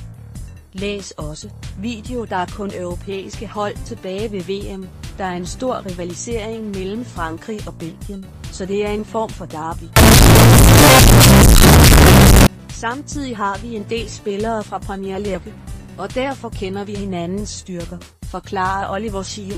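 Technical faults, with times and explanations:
9.96–12.47 s, float read as integer: harsh near-square wave at an almost fixed, high level with noise equally loud, likely from 32-bit float samples decoded as integers.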